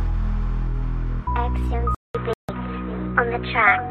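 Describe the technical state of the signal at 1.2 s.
At 1.2 s the signal is intact, with no dropout, distortion or other fault audible at that point.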